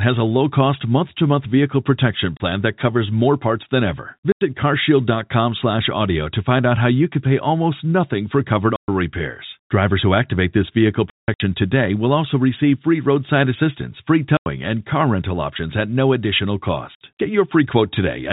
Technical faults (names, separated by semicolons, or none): packet loss filled with silence